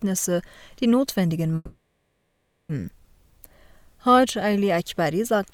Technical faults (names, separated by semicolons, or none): long network dropout